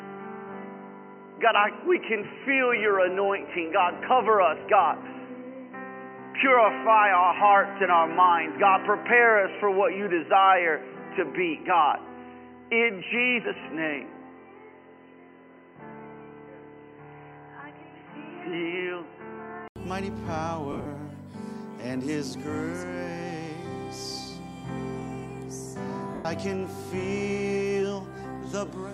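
From the start until 19.76 s the sound is dull and boxy, with nothing above 3 kHz, a faint hiss sitting far below the signal, and a slightly different level. At 19.76 s a silence of about 80 ms breaks in, and the sound opens up. This is most likely an input switched to a poorer device. A narrowband microphone or headset call profile was capturing first, with its own tone and noise floor, before the input moved to the fuller source.

At 20.72 s to 20.86 s the sound breaks into a noisy, smeared texture. About 110 ms is lost, scattered over 140 ms, and no single gap is longer than about 40 ms. At 26.15 s to 26.25 s a single 100 ms stretch smears the same way and fades toward silence. Both are lost LE Audio frames. The LC3 decoder concealed each gap by reusing the last spectrum with randomised signs, which turns tonal content into noise, and it faded that fill over the longer run.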